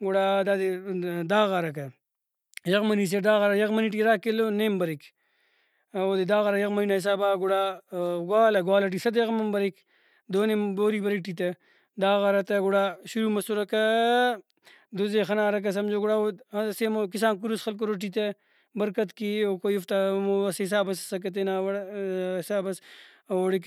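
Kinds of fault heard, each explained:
No technical faults can be heard in this recording.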